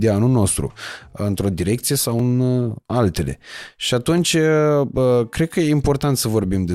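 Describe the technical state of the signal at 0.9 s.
At 0.9 s the speech signal is intact, with no audible fault at that moment.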